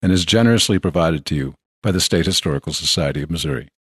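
At about 1.84 s the speech drops into a brief dip, an AAC frame loss with muting. One short frame, roughly 10 ms, went missing and was decoded as silence, so the overlapping windows fade the sound out and back in. The compression underneath is light and most likely low-delay AAC.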